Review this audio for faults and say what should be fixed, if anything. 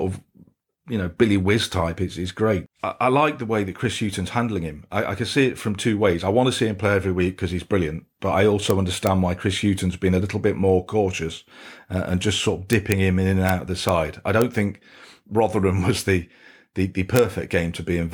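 Sharp, violent cracks at 8.70, 9.07, 12.73–12.92, 13.49, 13.89, 14.42 and 17.16–17.19 s are integer overflow: loud speech peaks wrap to the opposite sign instead of limiting. Use saturating arithmetic or clamp samples to full scale before the integer conversion.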